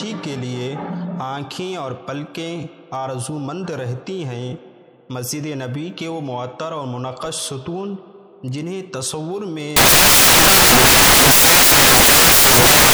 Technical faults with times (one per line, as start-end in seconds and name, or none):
9.76-12.93 samples built from the wrong bytes